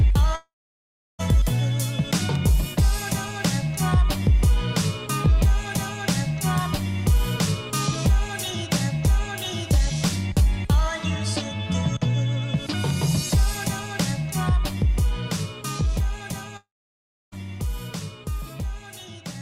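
From 0.35 to 1.21 s and 16.57 to 17.34 s, the audio smears into a brief fading buzz, then about 0.7 s of silence, resuming with material missing: a likely long network dropout.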